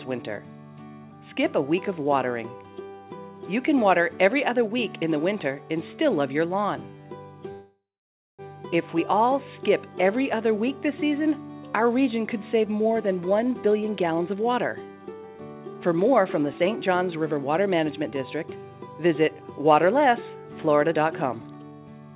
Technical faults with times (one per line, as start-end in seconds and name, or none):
7.52-8.42 call audio freeze
12.66-18.13 jitter buffer speed-up
20.78-22.15 jitter buffer speed-up